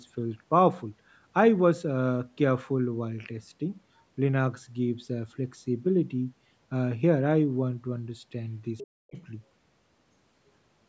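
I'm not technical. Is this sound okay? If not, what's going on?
No. Near the end of this speech clip, at 8.78 to 8.87 seconds and again at 9.15 to 9.2 seconds, a faint second voice slips in underneath. This is most likely the other side's voice leaking through. The talker's device plays the far end on a loudspeaker, and the microphone picks it back up. The part meant to remove that echo missed these brief scraps. The first scrap is fairly noticeable. The second is much quieter.

From 9.0 to 9.17 seconds, the talker's own voice suddenly drops away almost to nothing. It comes back in a fraction of a second. This is likely speech suppressed in double talk. Both sides were talking at once. The echo remover couldn't tell the talker from the echo, so it turned everything down. The talker briefly cuts out while the other side speaks.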